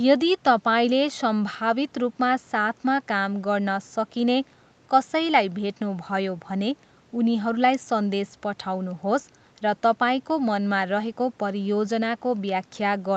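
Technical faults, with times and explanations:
The speech comes through an ordinary call chain: the microphone processing trims the lowest bass, and the call codec's band ends at 8 kHz with nothing above it, which fits an Opus call setting of around 48 kbps.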